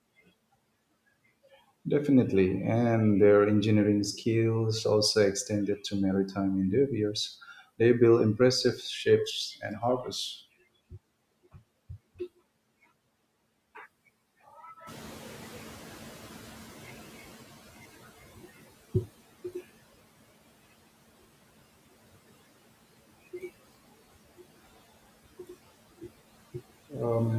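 From 14.86 s, right after the room noise jumps about 12 dB, the noise suppressor is catching up. Its lagging estimate lets the new noise through with less reduction at first, then cuts it about 16 dB by 18.74 s. A spectrogram shows a raised noise floor fading over 3.88 s.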